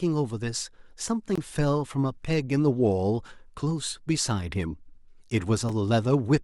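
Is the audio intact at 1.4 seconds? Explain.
No. Around 1.4 seconds the speech drops into a block of digital silence from 1.36 to 1.38 s, about 21 ms long, which fits a 1024-sample buffer left unfilled. The sound cuts out and back abruptly, heard as a brief hole.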